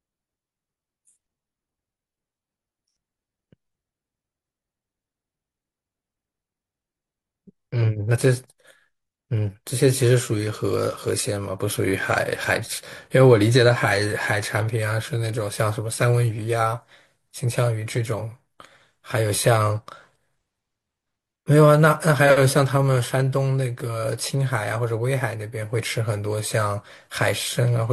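No technical faults are audible anywhere in this recording.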